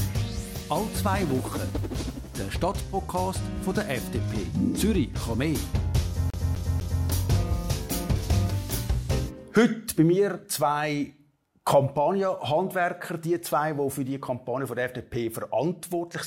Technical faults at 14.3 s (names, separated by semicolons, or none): none